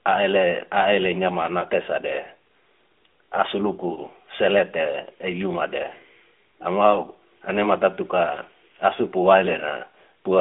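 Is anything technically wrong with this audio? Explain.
Yes. Two lost AMR speech frames occur, at 1.60–1.63 s and 3.94–3.99 s. Each is a single missing 20 ms frame, which the decoder fills by repeating its last good pitch and vocal-tract settings at lowered gain. Each is heard as a brief dip or warble. On a waveform it shows as a short amplitude sag. On a spectrogram, which is blank above 3.5 kHz because the line is band-limited to 250–3500 Hz, it appears as a smeared copy of the preceding harmonics.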